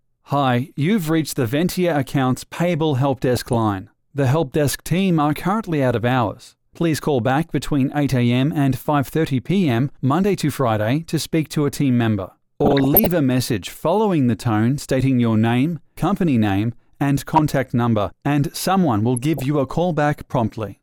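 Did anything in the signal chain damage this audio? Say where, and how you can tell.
Yes, DAB burbling from weak reception ahead of the MP2 decoder, at 3.36–3.57 s, 12.61–13.12 s (the longest), 17.35–17.39 s and 19.17–19.42 s. Residual bit errors of somewhere under 1 percent slipped past error correction, corrupting samples, which put short blips of noise in single sub-bands, and, where such errors get through, scale factors, which make sub-bands jump in level for up to a frame. A spectrogram shows scattered bright rectangular blocks confined to narrow bands, each up to a frame long, while the waveform stays largely continuous.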